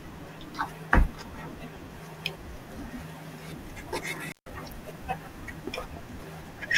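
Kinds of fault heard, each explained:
Intermittent contact: around 4.27 to 4.51 s the speech breaks off for about 143 ms as a loose connection opens, with crackle at each edge and faint hiss during the gap. That scratchy contact noise and hiss set it apart from a clean digital dropout's silence.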